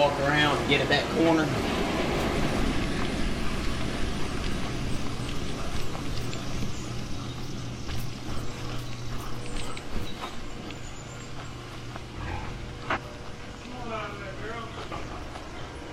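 Damaged data in a compressed stream occurs from 12.91 to 12.98 s, a span of about 60 ms. Part of the encoded data at this point is corrupt, so the decoder cannot read those frames correctly, loses its place in the stream and has to search for the next valid frame header before it can resume. The result is a brief chirp or blip that breaks into the sound, and playback picks up again just after the damaged stretch.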